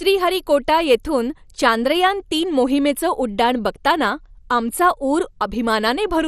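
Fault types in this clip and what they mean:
MP2 compression: the speech is dull, with nothing above about 13.6 kHz and a plainly audible gurgling, granular texture throughout, likely from MPEG Layer II coding at a low rate, around 64 kbps, dropping upper sub-bands and coarsely quantising the remaining ones.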